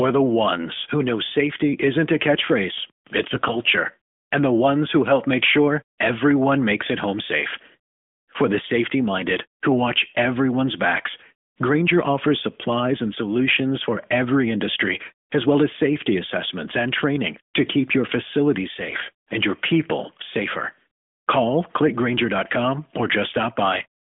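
From 3.28 to 3.59 s and again from 18.90 to 19.13 s, AMR bit errors turn the speech hoarse and gargly, the second burst harsher. Flipped low-priority bits misplace excitation pulses, yet pitch and level hold, unlike packet-loss gaps or repeats.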